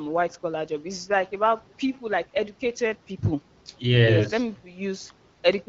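The speech comes through the AMR wideband (HD Voice) codec at 12.65 kbit/s with only light coding traces and shaped noise filling the band above 6.4 kHz, and no technical fault can be heard anywhere in the signal.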